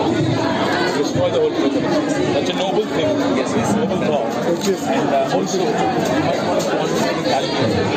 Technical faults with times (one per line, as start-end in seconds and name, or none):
0.00-7.96 gain pumping